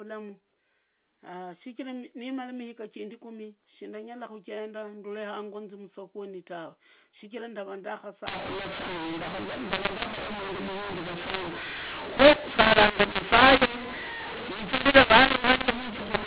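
For the first 8.27 seconds the speech sounds like ordinary telephone audio, narrow and capped below 4 kHz. From 8.27 s to the end there's a mu-law and A-law mix-up: the A-law bytes are being decoded as mu-law. Because the two curves map levels differently, loudness gets scrambled, with some parts too hot and others too soft. The speech turns harsh and gritty, and the quietest samples jump well above silence, so the pauses fill with hiss.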